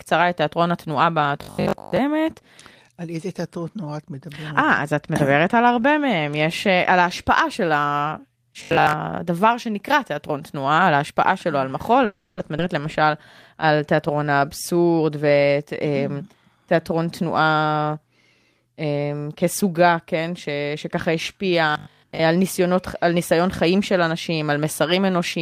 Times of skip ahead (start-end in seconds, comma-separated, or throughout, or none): 12.57-12.60